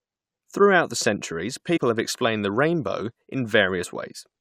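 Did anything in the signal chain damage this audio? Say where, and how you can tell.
Yes. Compressed frames were skipped at the codec or storage stage, at 0.46 s, 1.76–1.78 s and 3.83 s. The speech jumps ahead by roughly 70, 40 and 20 ms, multiples of a 21.3 ms frame. Overlapping frames smear each join into a soft blip, not a dropout's hard click.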